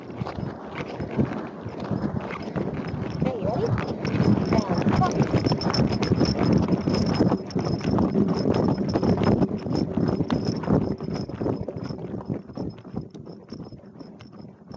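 Gain pumping runs through the whole recording, with the level swinging by around 10 dB. Loud and soft passages sit squashed close together. The likely cause is input gain set far too high, with a fast limiter pulling it down on each peak. On a waveform the envelope looks flattened. A spectrogram shows the top edge stopping near 8 kHz from the call's microphone processing.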